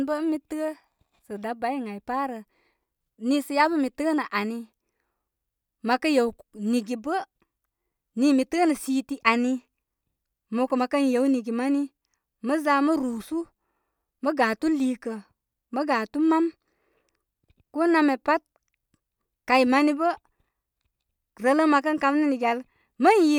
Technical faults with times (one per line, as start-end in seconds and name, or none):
none